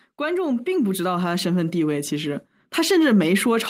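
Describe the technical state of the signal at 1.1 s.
At 1.1 s the signal is partway through an automatic gain rising event that runs from 0.17 s to 3.11 s. The gain control judged the input too quiet and is lifting its gain, so speech and background swell together, by about 7 dB across the span.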